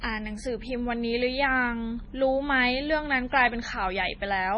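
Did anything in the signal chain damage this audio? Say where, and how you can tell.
Yes. MP3 compression damages the speech throughout, and the codec stage is the likely source. Nothing is present above 10.5 kHz: the treble stops at a fixed ceiling. The sound is watery and swirly, with metallic chirps on s sounds and heavy smearing on consonant onsets. The damage points to an encoder starved of bits, which fits a bitrate around 24 kbps. The encoder removed the top band and zeroed weak frequency lines, so those lines flicker on and off from frame to frame.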